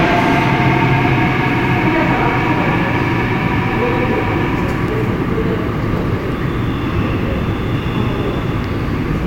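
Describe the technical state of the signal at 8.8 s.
At 8.8 s the signal is intact, with no dropout, distortion or other technical fault audible at that point.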